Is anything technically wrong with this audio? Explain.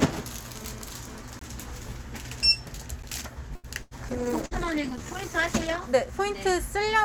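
Yes, there are several faults.

From 0.55 to 1.22 s there is a GSM phone buzz. A 2G handset nearby was moving data, pulsing its transmitter about 217 times a second, and the audio circuitry rectified those radio bursts. The result is a hard, raspy 217 Hz buzz rich in harmonics, unrelated to the sound itself. It sits about 17 dB below the signal and stutters on and off rather than holding steady, as data traffic does.

Two blocks of digital silence follow, at 1.39 to 1.41 s (about 21 ms) and at 3.02 s (about 11 ms). In each case a run of samples went to zero. The lengths fit blocks of 1024 and 512 samples. The audio drops to dead silence and returns with no fade. The longer one is heard as a brief hole, the shorter as a tick.

From 3.55 to 3.67 s there is a short stall from a late packet. A packet missed its deadline, the jitter buffer ran dry, and the receiver stretched the last sound for 84 ms until it arrived. 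Playback then resumed where it left off, so nothing is lost. The sound simply hangs on too long, with a faint buzz or dip, and everything after is delayed by that amount.

There are two bursts of packet loss, at 3.82 to 3.94 s and at 4.46 to 4.54 s. Consecutive packets never arrived in time. The receiver filled the gaps by continuing the previous sound and fading it, about 91 ms and 51 ms of filler. It then jumped ahead, skipping about 120 ms and 60 ms of real audio. Each gap is heard as a held buzz or fading hiss before an abrupt resumption.

From 4.11 to 5.99 s there is a call bitrate drop. The bandwidth estimate collapsed, and the encoder was pushed from 96 kbps down to 11 kbps, staying at the bottom for about 1.8 s. At that rate the codec quantises coarsely and discards high frequencies. The sound turns muffled, rough and watery until the bitrate climbs back.

From 4.28 to 5.08 s there is a jitter buffer slow-down, overlapping the bitrate drop. 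Running low on reserve, the receiver repeatedly duplicated single pitch periods and fragments of pauses, adding about 53 ms. Playback runs at roughly 94% speed with the pitch unchanged. Sounds are drawn out.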